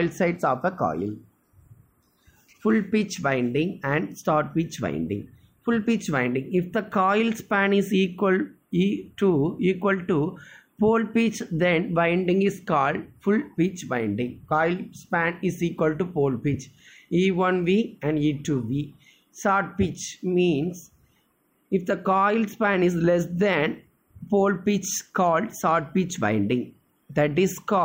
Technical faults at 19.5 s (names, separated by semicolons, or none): none